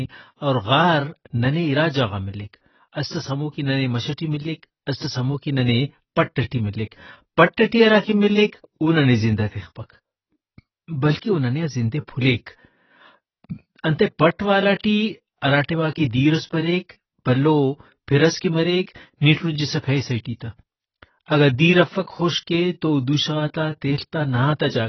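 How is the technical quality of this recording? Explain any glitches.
Technical quality is poor, held back by one fault that runs through the whole recording. The speech is band-limited, with nothing above 6 kHz, and sounds heavily degraded, dull and smeared, with a warbling, fizzy texture on sibilants and held sounds. The likely cause is AAC compression (AAC-LC) at a very low bitrate, one in keeping with about 16 kbps. To save bits, the encoder drops the top of the spectrum and coarsely quantises what remains, leaving spectral holes and noise-filled bands that produce the watery artefacts.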